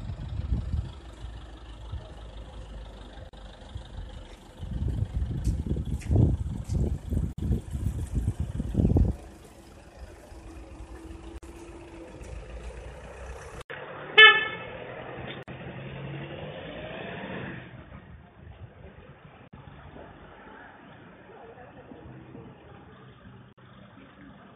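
Short dropouts first cut into the continuous sound at 3.29 s, 7.33 s and 11.38 s. Each is a brief hole, about 40 ms at the first and 49 ms thereafter, with its edges smeared by the codec, after which the sound resumes exactly where it stopped. This is a gap at a join of encoded pieces: the audio was encoded in 4-second segments and concatenated untrimmed, so each segment's leading encoder delay and padded final frame remain as silence.

At 13.62 s there is an 80 ms silence. From there to the end, the sound turns dull and boxy, with nothing above about 3.6 kHz, and a new background noise sits roughly 45 dB below the signal. Loudness stays about the same. The likely cause is an input switched to a poorer device, such as a headset call profile with a narrower band and its own noise floor.

The join gaps continue through this duller stretch, each about 49 ms, at 15.43 s, 19.48 s and 23.53 s, keeping the same 4-second rhythm.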